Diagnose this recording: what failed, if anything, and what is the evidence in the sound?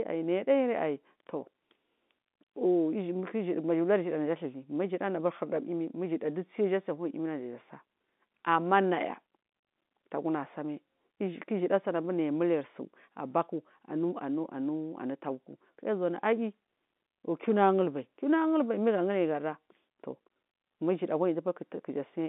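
Nothing has failed here, and no stage from the wiring through to playback leaves an audible fault. The speech arrives through G.711 telephone coding, confined to a line band of about 200 Hz to 3.6 kHz, with at most a faint quantisation noise that rises and falls with the signal level.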